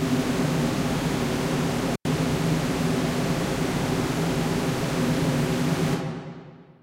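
At 1.93 s the sound cuts out with an intermittent contact fault. A loose cable or plug briefly lost connection. The line stays open for about 93 ms, leaving faint hiss. Crackle marks both edges, and full sound returns at 2.05 s.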